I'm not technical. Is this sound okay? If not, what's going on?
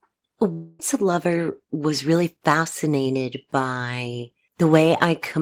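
No. From about 0.52 to 0.80 s there's a long network dropout, likely caused by audio arriving late or not at all. The speech turns into a fading buzz instead of going silent, and about a quarter second is simply missing when it resumes, unlike a brief click.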